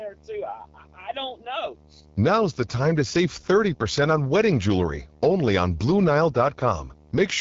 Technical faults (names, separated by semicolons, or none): video or display buzz; AMR wideband (HD Voice) codec